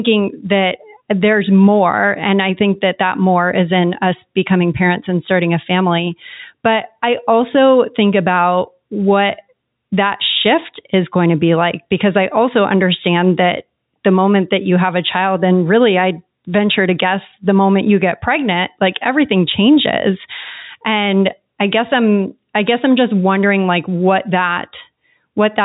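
No technical faults can be heard in the speech. It carries the narrow band of G.711 telephone coding, with nothing above 4 kHz and only a faint hiss that rises and falls with the level of the sound.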